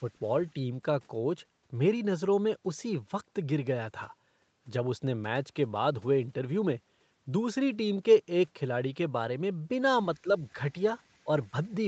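At 10.23 to 10.27 s, the speech is briefly turned down by about 10 dB for roughly 40 ms. This is likely speech suppressed in double talk: with both ends active at once, the echo canceller could not tell this talker apart from the loudspeaker echo and attenuated everything it heard. The result is a short, sudden dip in level rather than a full cut.

Shortly after come four scraps of echo leak, at 10.44 to 10.52 s, 11.03 to 11.27 s, 11.43 to 11.48 s and 11.70 to 11.74 s. On one side, a loudspeaker likely fed the call back into a microphone, and that echo canceller left some residue uncancelled. It returns as a delayed copy of the speech trailing by 191 ms, very faint at around 40 dB below the direct speech. It is heard as a faint ghost behind the talker, longest in the stretch after 11 s.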